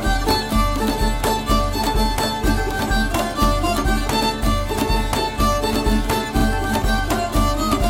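Repeated frames occur twice in this music as a run of compressed data is played back again. At 4.21 s a 92.9 ms block repeats, which fits four frames, and at 6.39 s a 46.4 ms block, about two frames, repeats. Each is a brief stutter.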